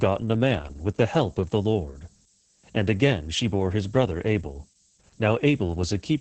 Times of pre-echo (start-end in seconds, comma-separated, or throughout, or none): none